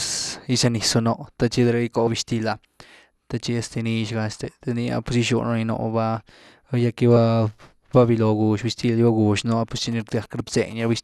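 Compressed frames skipped at 2.07 s, 4.44 s and 7.16 s. At each point the decoder dropped whole blocks of the coded stream, so the audio leaps forward rather than pausing. The jumps are roughly 100 ms, 50 ms and 30 ms. That fits losing about four, two and one frame of a 26.1 ms frame length. Because adjacent frames overlap, each join is a short smeared blip instead of a sharp click, and the speech lurches slightly ahead.

GSM signalling bursts run from 9.77 s to 10.73 s, about 20 dB below the speech. A nearby 2G handset is emitting sparse clusters of radio pulses, which fits its signalling state. The audio circuitry demodulates those pulses into sound. What comes through is a galloping dit-dit-dit of ticks and brief buzzes built on a 217 Hz burst rate, arriving in irregular groups and unrelated to the speech beneath it.

GSM phone buzz follows from 10.80 s to 10.98 s, about 26 dB below the speech. 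Here the handset's transmission has settled into the continuous 217-per-second burst train of an active call, and the audio path rectifies every burst. It is heard as a short, hard, raspy 217 Hz buzz, rich in harmonics, sitting steadily over the speech and unrelated to it until it stops.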